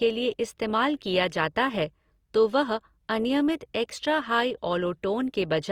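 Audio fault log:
throughout, Opus compression: the speech has a grainy, rough, noisy texture, plainly audible, where harmonics blur into hiss rather than swirling. This is likely Opus in its music (CELT) mode starved of bits, which fits a rate near 24 kbps: it keeps each band's energy but refills detail by copying lower bands or injecting noise. A spectrogram shows few holes, smeared noisy harmonics, and full bandwidth up to a cutoff around 20.2 kHz.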